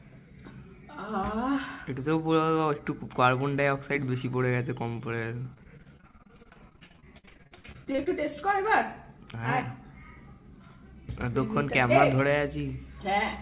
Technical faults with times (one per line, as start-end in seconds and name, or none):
5.42-8.08 repeated packet loss (robotic sound)